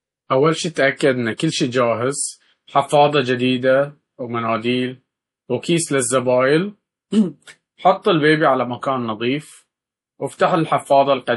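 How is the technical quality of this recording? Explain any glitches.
Audible codec damage throughout, plus one brief smeared attack.

Across the whole recording the speech sounds watery and swirly, with nothing above 11.5 kHz, likely MP3 compression at a low bitrate near 48 kbps dropping weak frequency detail.

From 1.37 to 1.40 s, just before "شي جاهز", a short hiss precedes the attack. This is pre-echo: block-wide quantisation noise leaking about 24 ms ahead of the onset.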